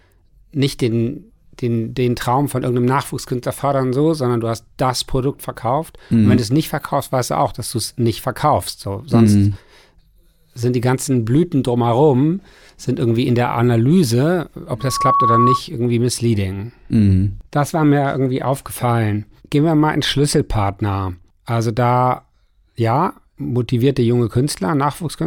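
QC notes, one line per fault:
14.79–15.62 s, loudspeaker feedback squeal: a lone 1.1 kHz tone swells up over roughly a third of a second and ends up a few dB above the speech. The mic is catching its own speaker, and at that pitch the loop gain went past one, so the tone kept feeding itself until it stopped.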